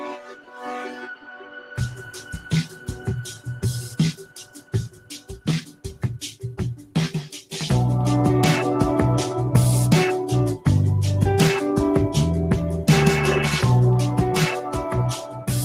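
A noise suppressor built for speech was left on across the whole clip, treating steady and decaying sound as noise and swinging the level by around 15 dB, so the audio pumps and thins. Sound cut by the noise suppressor is clearest from 0.0 to 3.63 s, 4.13 to 5.3 s, 5.65 to 5.85 s, 6.76 to 6.96 s and 15.14 to 15.5 s, with sustained parts sinking by up to about 16 dB.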